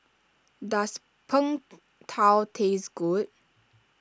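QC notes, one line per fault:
2.0 to 3.75 s, resampler restarted on every block: a regular ticking at 4 per second rides on the speech, one tick every 250 ms and only while the voice is sounding. Each 250 ms block went through the sample-rate converter separately, so at every edge the filter lacked the true neighbouring samples and left a small error. The pattern fits a conversion down to around 16 kHz.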